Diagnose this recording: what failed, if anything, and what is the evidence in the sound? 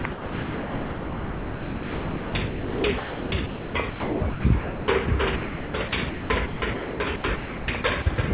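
The fault sits in call processing: sound chopped by the voice detector. From 0.02 to 5.08 s the sound drops in and out, and about 3.98 s of it is replaced by a synthetic hiss. The same thing happens from 5.36 to 8.18 s, where 1.52 s is filled. The likely cause is the sender's voice detector toggling between sending and silence, with comfort noise filling each gap. The band stops at 4 kHz, as expected for this call codec.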